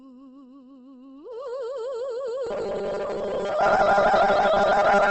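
A music clip whose tones sound rough, grainy and noisy throughout, with nothing above 8.2 kHz. This is likely Opus compression in its music mode at a low rate, which fits around 16 kbps. Starved bands are filled with folded or noise content instead of the original detail. From 2.47 s to the end at 5.11 s, the sound turns into a rigid, metallic 200 Hz buzz, robotic sound from repeated short buffers. Roughly half the audio is replaced, likely by a 5 ms buffer being replayed while fresh audio arrives too seldom.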